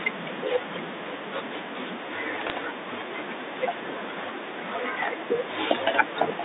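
Bit errors on a digital phone line strike between 2.47 and 2.52 s. Flipped bits in the G.711 A-law stream each corrupt a single sample. With an error rate on the order of 0.1 percent, sign or high-bit hits produce a brief burst of sharp ticks and crackle over the speech, which fits a few corrupted frames.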